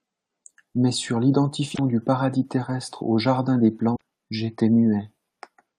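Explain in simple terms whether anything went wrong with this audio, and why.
Two short glitches interrupt the speech. Both are damaged data in a compressed stream. The first runs from about 1.72 to 1.79 seconds. The second runs from about 3.93 to 4.01 seconds. Each lasts under a tenth of a second and sounds like a quick chirp, squawk, click or short gap. Part of the stored file was wrong at those points. The decoder could not read that stretch properly and lost its place. It then hunted for the next clean starting point.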